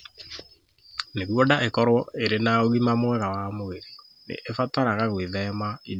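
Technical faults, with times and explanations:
Nothing technical goes wrong anywhere in this speech recording, so there's nothing here to flag.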